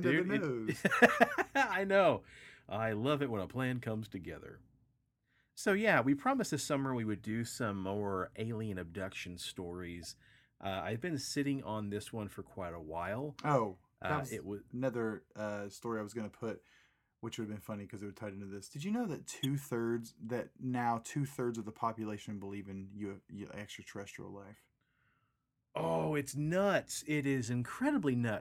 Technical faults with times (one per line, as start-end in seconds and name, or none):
1.72-1.74 corrupt frame decoded
10.02-10.06 corrupt frame decoded
19.43-19.45 corrupt frame decoded